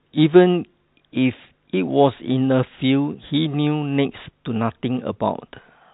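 No technical fault can be heard in the speech. It carries the sound of G.711 telephone coding, with nothing above about 3.9 kHz and at most a faint quantisation hiss that tracks the level of the voice.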